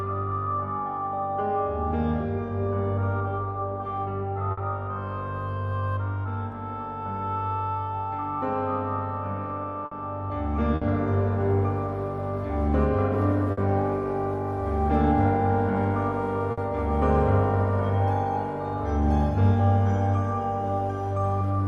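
At 4.51, 9.85, 10.75, 13.51 and 16.51 s there is a burst of packet loss, each spanning about 0.09 s. Consecutive packets failed to arrive in time, so the receiver extended the last good audio for about 60 ms while fading it down, heard as a brief held buzz or decaying hiss. Playback then picks up again with about 60 ms of material skipped each time.

From 19.02 to 21.10 s there is timecode bleed. Linear timecode running at 25 frames per second has coupled into the signal path from an adjacent track or cable. Its square wave flips between pitches near 1 and 2 kHz, heard as a faint, steady chirping warble sitting roughly 40 dB below the main sound.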